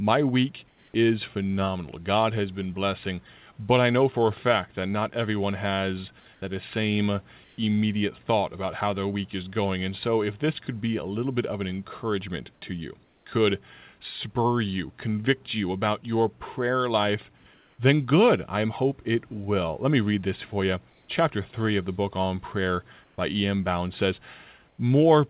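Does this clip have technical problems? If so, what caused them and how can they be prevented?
Yes. Comfort noise in place of the background fills the speech pauses at 0.68–0.94, 6.34–6.42, 7.44–7.58, 12.54–13.26, 17.38–17.78, 20.9–21.08, 23.04–23.18 and 24.68–24.78 s. The room's textured background gives way to a flat, featureless hiss that shifts level by about 1 to 4 dB. Unlike a dropout or a noise gate, the pause never goes silent. The likely cause is discontinuous transmission: the sender stops sending during silence and the receiver synthesises stand-in noise. Turning off discontinuous transmission at the sender prevents it.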